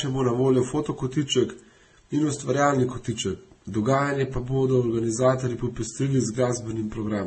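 Throughout the speech, nothing is heard above 8.4 kHz. Two layers of coding artefacts sound together. The likely cause is transcoding between lossy codecs, which fits Vorbis near 24 kbit/s re-encoded as 32 kbit/s MP3. The MP3 stage wastes bits on the earlier artefacts.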